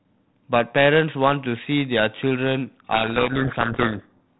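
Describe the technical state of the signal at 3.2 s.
At 3.2 s the signal is inside a codec payload misread running from 2.94 to 4.18 s. The decoder unpacks the G.726 code words in the wrong bit order, so the sample differences come out wrong, and the speech is buried under harsh distortion within the 32 kbit/s telephone band.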